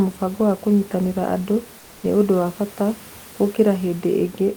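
A speech clip with room noise about 26 dB below the speech. From 1.79 to 2.03 s, between "mũbango wa kũnyitĩrĩra andũ" and "nĩ ũndũ wa bata", comfort noise replaces the background. It is a flat, featureless hiss, about 1 dB quieter. The likely cause is discontinuous transmission, such as Opus DTX.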